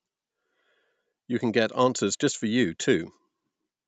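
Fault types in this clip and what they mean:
No faults in this clip.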